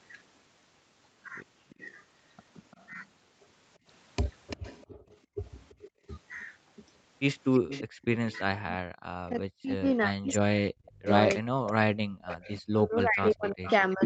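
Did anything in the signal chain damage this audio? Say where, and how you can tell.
Yes. The call processing at the far end, where the call plays on a loudspeaker, leaves a copy of the speech returning 341 ms late at 1.69–3.02, 4.5–5.9, 7.69–8.76, 10.32–11.12 and 12.31–13.73 s. This is likely echo leak, ranging from about 30 dB below the speech to about 10 dB below. Its fixed delay rules out room reverberation.

The background is gated by the echo canceller at 4.87–6.04 s and again at 7.86–7.98 s. The room sound drops by about 35 dB and 32 dB respectively, for roughly half a second in total in the first case. It returns when the canceller releases. This is a clamp on the microphone, not a network dropout.

From 8.26 s to the end, the speech is likely suppressed in double talk. It dips, thins and breaks up, sinking as much as about 40 dB, while echo arrives at the same time. Because the losses follow the overlapping sound rather than arriving as regular gaps, this is canceller suppression, not packet loss.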